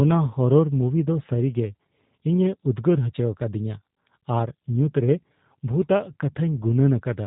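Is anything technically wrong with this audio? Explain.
Yes. The whole speech clip has passed through the G.729 codec, and the damage is plainly audible from start to finish. The codec rebuilds each short slice of speech from a model of the vocal tract, a pitch predictor and a handful of pulses, codes it at 8 kbit/s, and throws away everything above 4 kHz. The result sounds muffled and band-limited, with a slightly rough, synthetic buzz in the voice.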